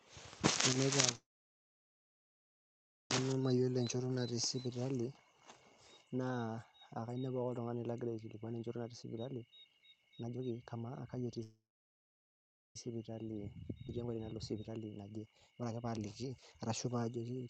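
At 1.15 s the speech stops and holds for almost two seconds of near silence until 3.11 s, then resumes exactly where it left off with nothing lost. This is a call audio freeze, likely from packets delayed in transit so the jitter buffer ran dry.

From 4.85 to 11.40 s the speech sounds hurried at unchanged pitch, running about 19% fast. This is jitter buffer speed-up: the receiver trims small pitch-period slices repeatedly, shedding roughly one and a half seconds of built-up delay.

A second freeze runs from 11.43 to 12.76 s. It is a gap of about 1.3 s, mostly silent, and again the speech resumes without loss. Held-up packets are likely behind it too.

From 12.90 s to the end, the speech is sped up again, about 24% faster, trimming around a second of delay. Within that stretch, at 13.87 to 13.89 s, playback skips ahead. Roughly 0.7 s of speech is dropped and the two sides are butted together almost seamlessly.

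Throughout, the Opus call path at 48 kbps limits the audio to an 8 kHz band.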